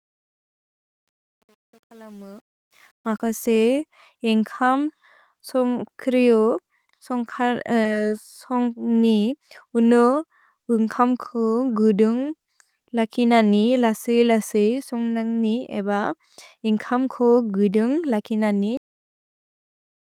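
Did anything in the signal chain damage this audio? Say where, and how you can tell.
Yes, three stages left marks.

Truncation distortion on a fade appears in the sample-format conversion or gain stage over the opening fade-in, from 0.0 to 3.23 s, worst from 0.0 to 2.69 s. The gain curve itself is smooth, but while the level is low the speech sounds gritty. That fits a stage keeping about 9 bits without dither, so quiet passages collapse into a few coarse steps. Added noise would hiss evenly instead of crumbling.

Short concealed packet loss occurs in the network path, with concealment in the codec, at 7.83 to 7.87 s. About 20 ms of audio went missing, and the receiver covered it with roughly 20 ms of synthesised continuation, which is heard as a brief smear before the real signal blends back in. A plain dropout would leave a hole of silence or a click. Here the gap is bridged with sound that carries on from what came just before.

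A cut-off end occurs at 18.77 s and points to the buffer or storage stage. The speech stops mid-sound and falls straight to digital silence that runs to the end of the clip. No decay and no gain ramp lead into it. That abruptness separates it from a deliberate fade-out. It fits final buffers that were never written, not an editor trimming the tail.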